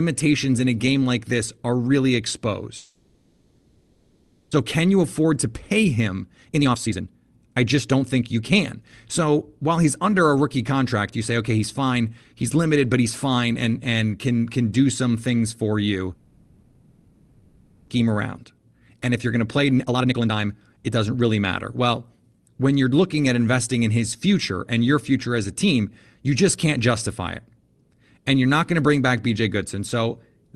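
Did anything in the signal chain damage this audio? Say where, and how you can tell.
Yes. At the network stage, there are two long network dropouts, at 2.77 to 4.55 s and 16.14 to 17.92 s. Each time the sound dissolves into a buzzy continuation of the last syllable that fades to a low steady noise, and about 1 s of audio never returns. On a spectrogram, smeared, repeating harmonics fade into a flat noise floor. The waveform has no true silence. The receiver likely filled the roughly 1.8 s gap itself after packets stopped arriving.

Right after each dropout, the jitter buffer speed-up catches up on the roughly 0.7 s of delay the stall built up. From 4.63 to 8.81 s the speech runs at 117% speed, and from 18.00 to 21.86 s at 119%. It sounds hurried but keeps its pitch. On a spectrogram, the harmonics stay at the same frequencies while syllables and gaps shrink in time. The waveform shows many small splices where one or a few pitch periods were cut out.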